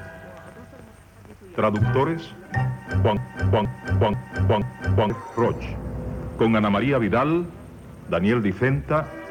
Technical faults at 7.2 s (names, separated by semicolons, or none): none